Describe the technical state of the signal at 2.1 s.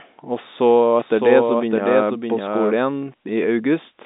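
At 2.1 s a second copy of the speech, about 5 dB quieter, runs about 0.7 s behind the first, with no reverb tail, cutting in abruptly at 0.99 s and out at 2.81 s. This doubled audio track is likely from a second capture path or misaligned edit.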